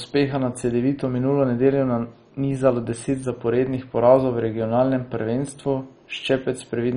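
Throughout the speech, nothing reaches above 10.4 kHz, and a gurgling, granular roughness persists. This is likely heavy MP2 compression at a low bitrate, perhaps near 32 kbps, switching off upper sub-bands.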